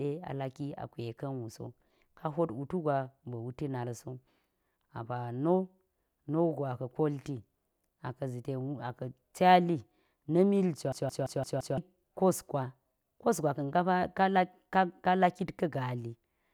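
From 10.92 to 11.78 s, after "cali na̱ mil", a system hang loop replays one 171 ms slice five times. This makes a 5.9 Hz stutter, with identical blocks repeating on the waveform.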